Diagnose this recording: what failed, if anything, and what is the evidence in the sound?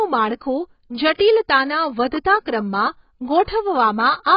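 AAC compression throughout, at the codec stage: nothing remains above 5.3 kHz, and the speech sounds dull and heavily smeared. The likely cause is AAC-LC quantising its spectral lines coarsely against a hearing model, which fits a low bitrate around 16 kbps.

Pre-echo from 1.14 to 1.20 s, also at the codec stage: about 55 ms of hiss arrives just ahead of an attack, blurring its onset. The transform block spread quantisation noise sized for the loud onset across the quiet moment before it.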